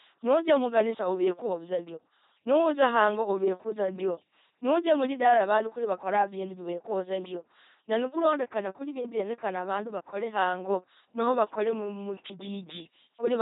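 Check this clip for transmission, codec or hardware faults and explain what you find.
The speech carries heavy LPC-10 vocoder damage from start to finish. Throughout, every instant is rebuilt as either a pulse-train buzz or pure noise through a ten-pole vocal tract filter, giving a mechanical robot voice with stray buzz or hiss at wrong voicing calls, nothing above 3.8 kHz, and a sound that fits 2.4 kbit/s. Unlike waveform-coding codecs, no natural glottal texture survives.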